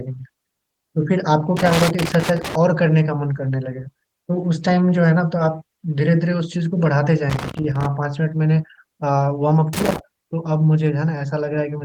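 Loose connector crackle breaks into the speech from 1.57 to 2.55 s, 7.30 to 7.86 s and 9.73 to 9.99 s. A worn contact making and breaking chops the signal into irregular scratchy bursts, unlike the evenly spaced clicks of a buffer fault.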